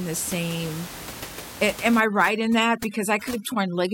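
From 2.0 s to the end, overdone noise removal sets in: an over-aggressive reducer pulls individual frequency bands down to near nothing whenever they approach its noise estimate. The room noise, about 14 dB below the speech, drops and breaks up into twinkling specks, and the quieter speech components vanish with it.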